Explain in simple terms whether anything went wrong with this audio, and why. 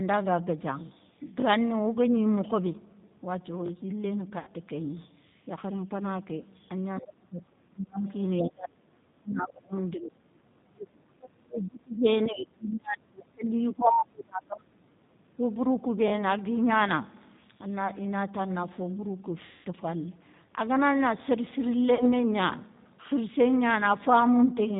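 Several things went wrong, and the first runs through the whole clip. The speech was squeezed through the G.729 codec, a low-quality phone codec that rebuilds a voice from a rough model. It sounds clearly rough, slightly robotic and muffled, with nothing bright at the top end. Because it never lets up, it is easy to tell apart from the brief dropouts below.

Next, VoIP packet loss concealed by the speech codec appears at 4.39 to 4.51 s, 19.45 to 19.67 s and 21.95 to 22.09 s. Chunks of audio went missing, about 80 ms, 200 ms and 40 ms of it. The decoder guessed the gaps by stretching the last sound into a fading buzz, and the voice stays a little warped for a moment after each one. That smeared, buzzy fill is different from a clean silent gap.

Finally, the voice repeatedly ducks away at 7.0 to 8.06 s, 8.38 to 8.81 s, 9.18 to 9.76 s, 9.96 to 10.19 s, 10.47 to 12.06 s, 12.3 to 13.51 s, 13.73 to 14.93 s and 15.18 to 15.41 s. 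It drops sharply, sometimes almost to nothing, in uneven bursts. This is likely speech suppressed in double talk: the other person spoke at the same moment, and the echo canceller muted this talker by mistake. The sound falls away without any buzzy fill, which sets it apart from the packet loss.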